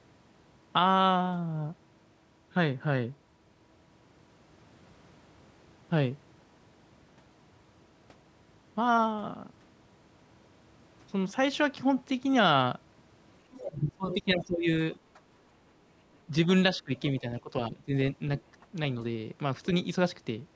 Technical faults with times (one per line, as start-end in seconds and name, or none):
13.51-14.15 other side's voice leaking through
13.70-15.19 speech suppressed in double talk
14.93-14.99 other side's voice leaking through
16.26-17.93 speech suppressed in double talk
16.97-17.41 other side's voice leaking through
18.62-18.66 speech suppressed in double talk